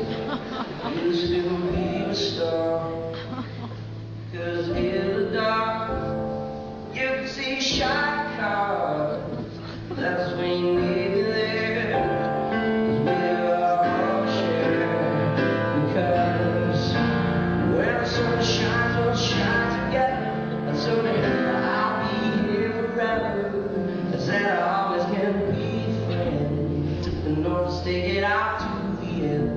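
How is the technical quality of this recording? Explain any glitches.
No technical glitches can be heard anywhere in the recording. It runs without any interruption, dropout or distortion at any point.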